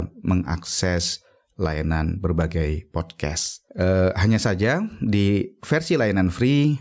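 Gain pumping runs through the whole recording. The input gain is likely set far too high for the microphone, so a fast limiter or compressor keeps clamping down whenever the speech gets loud, then releasing in the pauses. The level swings by around 10 dB. Loud and quiet passages sit unnaturally close together, giving a squashed sound. The call microphone processing, with nothing above 8 kHz, sits underneath this.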